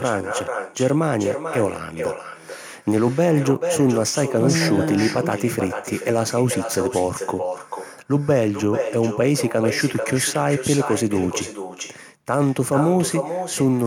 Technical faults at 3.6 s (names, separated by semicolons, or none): echo with no canceller